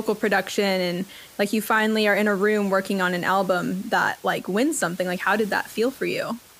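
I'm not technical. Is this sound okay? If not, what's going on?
Yes, nothing has gone wrong with how this speech was recorded or played back. A faint room noise can be heard underneath, well below the speaking level, and that simply comes from the space where the microphone was.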